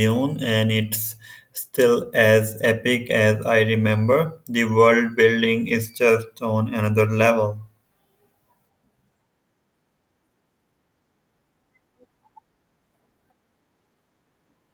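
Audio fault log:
The speech signal shows no audible technical faults at any point in the recording.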